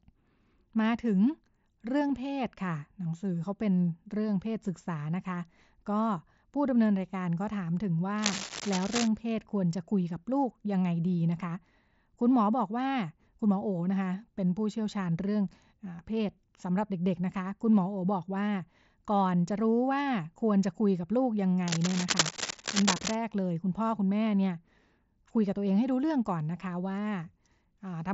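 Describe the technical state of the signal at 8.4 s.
At 8.4 s there is cable scratch noise, from 8.18 to 9.08 s. Dense, uneven scratching bursts sit only slightly below the sound. A worn, moving connector is the likely cause.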